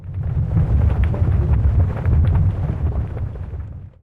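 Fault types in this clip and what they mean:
No audible faults are present in this recording.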